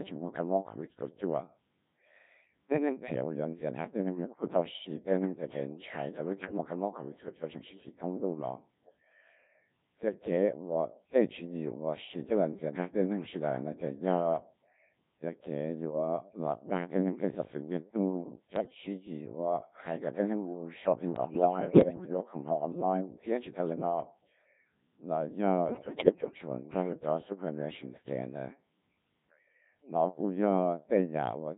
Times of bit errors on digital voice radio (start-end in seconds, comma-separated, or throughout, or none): 6.40-6.58, 18.56-18.74, 21.16-22.17, 25.68-26.38